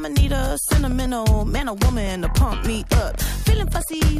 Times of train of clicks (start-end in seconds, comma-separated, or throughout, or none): 0.91-4.18